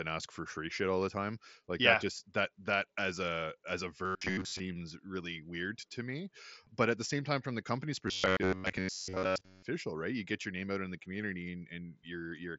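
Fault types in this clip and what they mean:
Robotic sound from repeated short buffers: twice, most of the sound becomes a rigid metallic buzz at 93.8 Hz, likely from roughly 11 ms chunks looping while real audio gets skipped.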